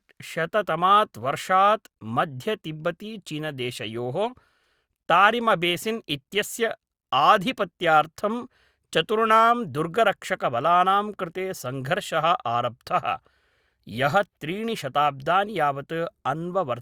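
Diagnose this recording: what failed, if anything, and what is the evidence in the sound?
No fault found in this recording.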